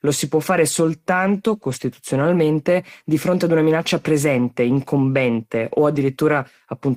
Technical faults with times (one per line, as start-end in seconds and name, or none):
1.67-1.81 lost packet rebuilt from error correction
5.95-6.01 lost packet rebuilt from error correction